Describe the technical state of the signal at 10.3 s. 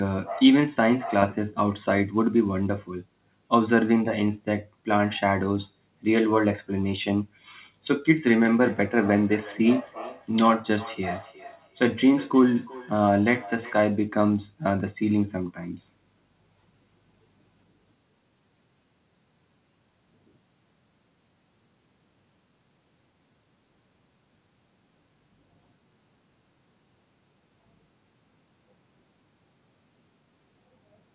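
At 10.3 s the signal is inside a feedback echo between two devices running from 8.24 to 13.85 s. A second device replays the call into this microphone, whose canceller ignores it, so each word returns about every 0.4 s, peaking at about -19 dB. Unlike room reverb, the copies are discrete at a fixed spacing.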